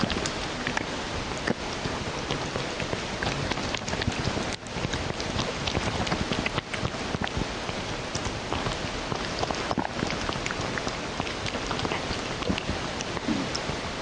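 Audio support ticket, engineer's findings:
Gain pumping throughout. Gain swings around 5 dB, with dynamics squashed. Likely cause: input gain set far too high, with a fast limiter or compressor clamping every peak and releasing between.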